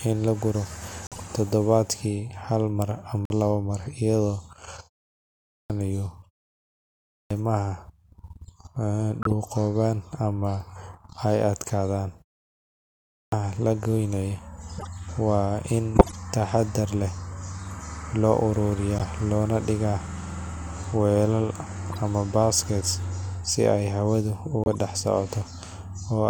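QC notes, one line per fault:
1.07–1.22, 3.25–3.32, 9.22–9.33, 14.76–14.87, 15.95–16.16, 18.99–19.01, 21.92–21.97 and 24.64–24.75 s: corrupt frame decoded. A handful of damaged compressed frames each time got played anyway, so garbled gains and codes throw energy to odd frequencies as short chirps and noise blips. The 15.95 s one hits near full scale; the 1.07, 14.76 and 21.92 s ones are faint.
5.15, 6.74 and 12.74 s: clipped start after a pause. After gaps of about a third to 0.6 of a second, the output path needs time to wake back up, so roughly 0.55–0.58 s of each new phrase gets swallowed and the sound jumps in abruptly, missing its opening.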